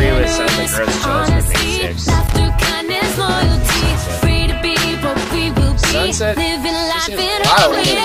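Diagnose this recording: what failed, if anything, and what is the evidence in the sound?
Loose connector crackle in the analogue wiring: irregular bursts of scratchy crackle from 2.12 to 2.34 s and from 5.11 to 5.35 s. A worn contact making and breaking chops the signal, and any DC on the line adds pops. The uneven, jittery texture distinguishes it from evenly spaced digital clicks or clean buffer dropouts.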